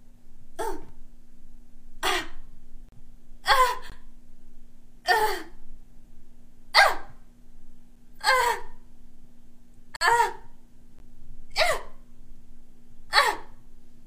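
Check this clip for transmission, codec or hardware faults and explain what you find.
There's one problem here: gaps between stream segments at 0.89, 2.89–2.92, 3.90–3.92, 7.96, 9.96–10.01 and 10.99 s. The 1 s segments' timestamps don't quite meet, so hard-edged silent holes of 4 to 50 ms drop into the sound.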